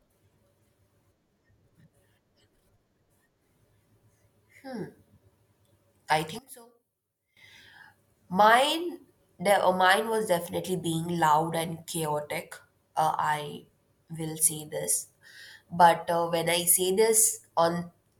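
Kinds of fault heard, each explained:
One channel inverted: From 6.39 to 7.37 s the speech drops by about 16 dB, as if only a faint residue remains. The likely cause is one stereo channel flipped in polarity, so the centred speech cancels when the channels combine to mono.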